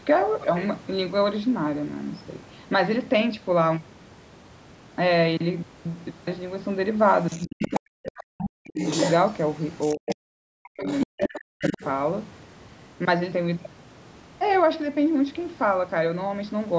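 From 7.22 to 7.8 s the other side's voice leaks through, sitting roughly 10 dB under the speech. It's likely a loudspeaker echo the canceller didn't fully remove. It returns briefly at 8.39 to 8.45 s, then more strongly, only about 5 dB down, from 8.75 to 10.16 s, 10.87 to 11.4 s and 11.62 to 11.84 s.

Overlapping that, the speech gets suppressed in double talk from 7.45 to 8.77 s, 9.94 to 10.87 s and 11.05 to 11.81 s. The talker's level dips sharply, by as much as 40 dB in places, and chops out while the leak plays. That's likely the canceller ducking everything because it can't separate the two voices.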